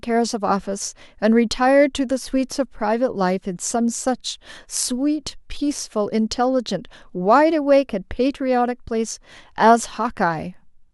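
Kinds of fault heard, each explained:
No kinds of fault are heard in this clip.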